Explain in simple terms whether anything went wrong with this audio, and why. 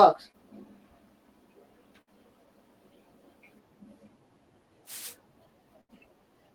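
Yes, a few things went wrong in this speech recording.

At about 0.31 to 0.35 s there is a short concealed packet loss. About 20 ms of the call arrived too late. The receiver guessed the gap by continuing the last sound, leaving a tiny smear.

At 2.01 to 2.09 s and 5.81 to 5.91 s there is a burst of packet loss. About 60 ms and then 80 ms went missing. The sound stretches into a fading buzz or hiss, then jumps ahead.

From 4.85 to 5.17 s there is a wireless microphone noise hit. The radio signal briefly faded, so there is a short swish of static.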